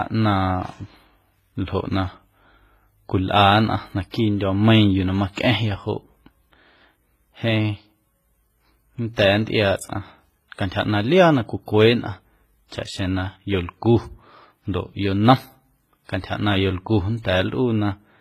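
The whole speech clip carries one fault from start to finish. Two kinds of codec artefact sit on top of each other. The artefacts of one coder are heard together with those of another. Nothing is left above 14.9 kHz. This points to transcoding between lossy codecs, likely a low-rate WMA stage near 24 kbit/s followed by HE-AAC near 20 kbit/s. The second encoder spent its bits re-coding the first one's damage and then added its own.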